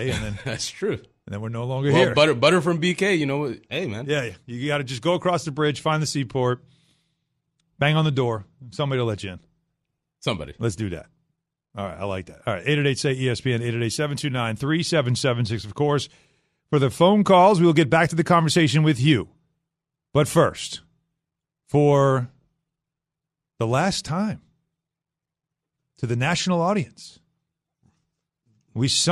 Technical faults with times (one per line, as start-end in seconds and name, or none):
0.00-29.11 MP2 compression